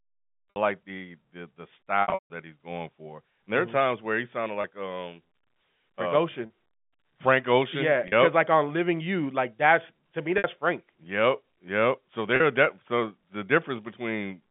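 Packet loss with pitch repetition occurs at 0.53, 2.02 to 2.30, 4.62, 6.46, 8.08, 10.38 and 12.36 s. At each point, lost audio was bridged by looping the last pitch period. Gaps of 20 to 60 ms sound like a briefly held, buzzy tone, with gap lengths that fit 20 ms packets. Around 2.02 to 2.30 s, losses scattered over 280 ms, the longest run 160 ms, fade to silence before a cross-fade back. On a spectrogram, the harmonics run frozen and flat, then decay, all inside the narrow telephone band of the G.711 line.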